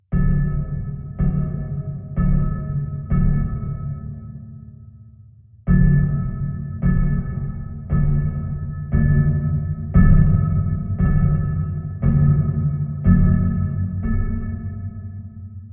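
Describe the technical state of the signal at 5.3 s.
Nothing is wrong with the signal at 5.3 s, and the audio runs intact through that moment.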